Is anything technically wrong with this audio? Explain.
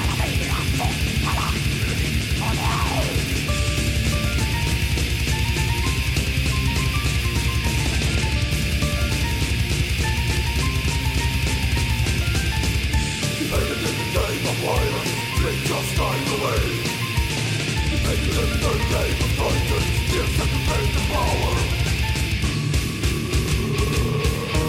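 No, there is nothing technically wrong with it.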